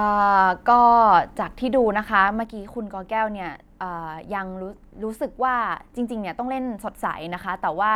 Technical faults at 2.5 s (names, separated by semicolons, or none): one channel drops out